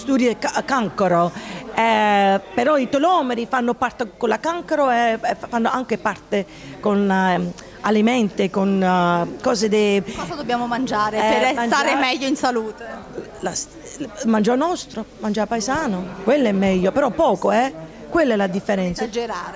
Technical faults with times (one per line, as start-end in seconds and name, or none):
none